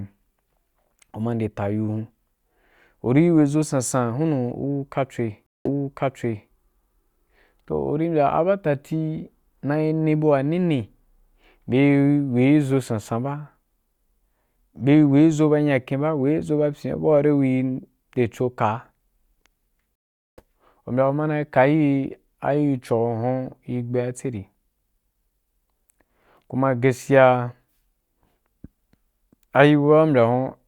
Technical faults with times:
5.46-6.51 stream reconnect
19.95-20.40 stream reconnect

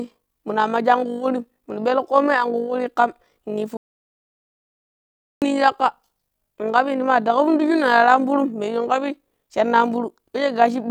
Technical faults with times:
0.00-10.91 overlap-add ripple
3.77-5.42 playback stall

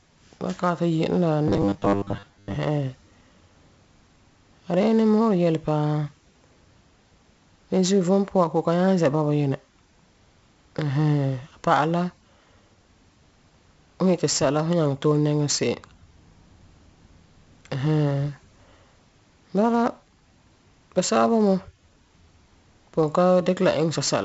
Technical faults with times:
0.00-24.24 4-bit ADPCM compression
1.48-2.57 robotic sound from repeated short buffers

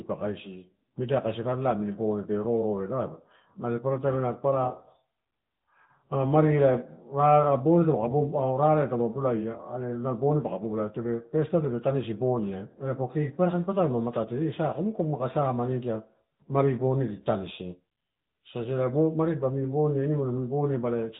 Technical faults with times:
0.00-21.19 AMR narrowband mobile codec

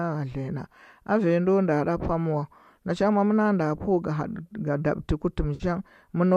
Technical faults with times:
5.55-5.64 AAC frame loss with concealment

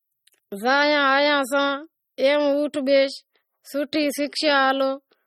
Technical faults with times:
0.00-5.26 MP3 compression

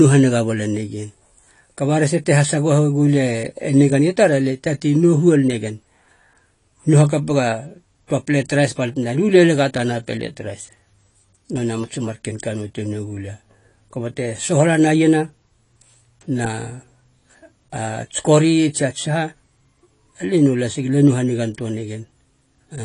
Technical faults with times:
0.00-22.85 AAC compression

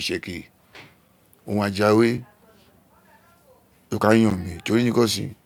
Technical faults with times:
2.18 block of digital silence
4.30 block of digital silence

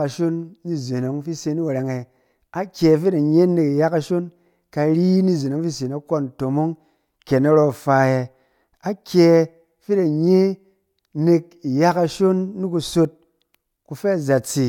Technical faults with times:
none

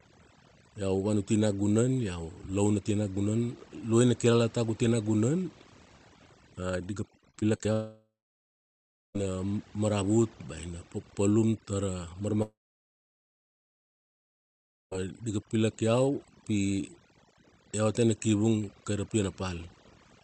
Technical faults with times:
0.00-20.24 overdone noise removal
7.17-7.66 repeated packet loss (robotic sound)
7.72-9.16 long network dropout
12.42-14.93 long network dropout

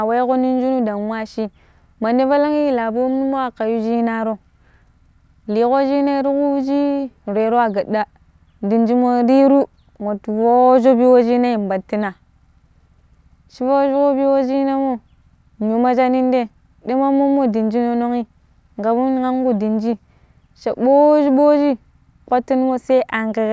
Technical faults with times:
none

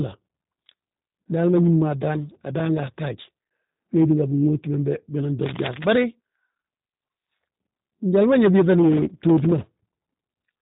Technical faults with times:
0.00-10.62 G.729 codec
5.42-5.88 cable scratch noise

